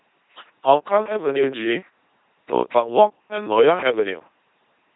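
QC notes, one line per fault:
Throughout: LPC-10 vocoder. The speech is a buzzing, mechanical robot voice, which fits the 2.4 kbit/s LPC-10 vocoder. Each moment is synthesised as either a pulse-train buzz or noise through a simple tract filter. Damage is heavy, with nothing above 3.9 kHz.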